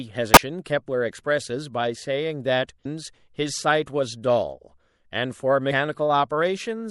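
Throughout the speech, the sound is watery and dull-topped, likely from MP3 compression at a low bitrate around 64 kbps. Unlike a plain low-pass filter, weak detail swirls in and out. Damaged data in the compressed stream breaks in at 0.33 to 0.37 s, 2.82 to 2.86 s and 5.68 to 5.72 s. The decoder loses sync on corrupted frames and searches for the next frame header.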